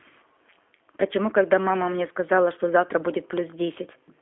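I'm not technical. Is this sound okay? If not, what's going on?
No. The speech went through the G.729 codec, a very low-data phone-call format, the whole way through. Instead of sending the real sound, it sends a rough recipe for the voice in tiny 10 ms slices and rebuilds the voice from that at the other end. Nothing above about 3.5 kHz survives, so the voice sounds narrow and muffled like a phone line, and the rebuilt speech has a plainly rough, slightly synthetic edge.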